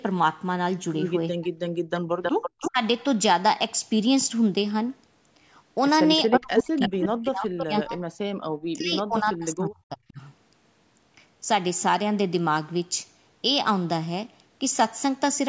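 From 1.33 to 1.58 s the speech dips sharply, by around 40 dB at its deepest. This is speech suppressed in double talk, likely an echo canceller that could not tell this talker from the far side's loudspeaker echo and ducked both. The ducking follows overlapping talk rather than delayed repeats.

From 1.95 to 2.7 s a copy of the voice trails it by 320 ms, nearly as loud as the speech itself. This is echo leak, likely a speakerphone whose canceller let its microphone pickup return. The fixed delay separates it from reverberation.

From 2.06 to 2.16 s the background drops out for about 50 ms, by about 30 dB, and then returns. This is background gated by the echo canceller.

A second short speech suppression in double talk follows from 2.68 to 2.8 s. Echo leak returns from 6.16 to 7.83 s, again 320 ms late and strong. From 6.26 to 10.21 s the speech is suppressed again, in pieces totalling about three seconds. 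Within that stretch, from 8.78 to 8.84 s, a much fainter echo appears at 365 ms.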